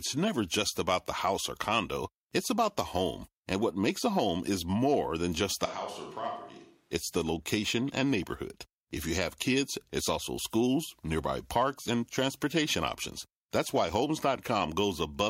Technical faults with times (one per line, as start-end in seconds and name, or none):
5.66-6.92 switch to a distant microphone